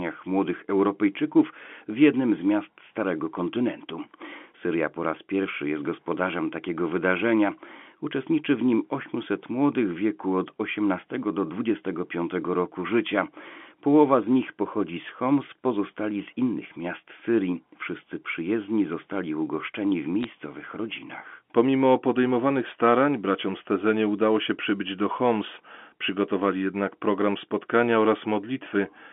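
At 20.23 to 20.30 s, after "przyjezdni zostali ugoszczeni w", and at 22.56 to 22.62 s, before "starań braciom", bit errors on a digital phone line flip bits in single telephone-coded samples, and hits on high bits give sharp ticks. These show as isolated waveform spikes and thin vertical spectrogram lines, denser in the second burst.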